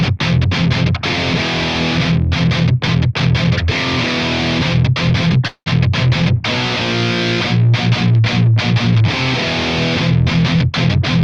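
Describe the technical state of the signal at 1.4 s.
At 1.4 s the signal is intact, with no dropout, glitch or distortion, only the ordinary coding character of the call path, whose top end stops around 12 kHz.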